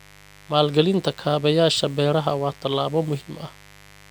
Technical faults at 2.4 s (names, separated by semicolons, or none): mains buzz